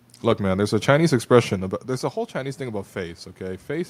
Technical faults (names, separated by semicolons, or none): automatic gain rising